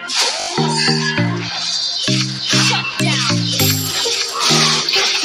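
At 0.40 s a repeated buffer occurs. New audio arrived late, so the device replayed its last block instead of waiting. The same short slice sounds five times in a row until 0.48 s, with a hard join at each repeat. Each slice fits a 20 ms buffer, so the result is a brief buzzy stutter. A second repeated buffer runs from 2.94 to 2.96 s, where one slice plays twice, heard as a single click. Little or no audio appears to be lost either time.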